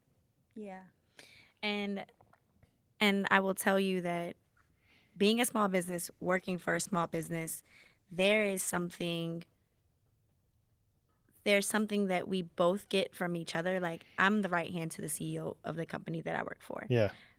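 Right after "being a small", at 5.94 s, there's a call bitrate drop that lasts until about 9.25 s. The speech goes coarse and watery, which fits the encoder being squeezed from around 32 kbps down to roughly 14 kbps after the connection's bandwidth estimate fell. It sits at that lowest quality for about 3.2 s, and the roughness clears once the bitrate climbs back.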